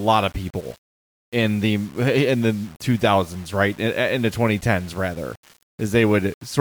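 Low bit depth without dither runs throughout the speech. A grainy distortion, roughly 30 dB below the signal, clings to every sound and shifts with it. It likely comes from rounding to coarse steps with no dither, which fits 7 bits, so the error tracks the signal.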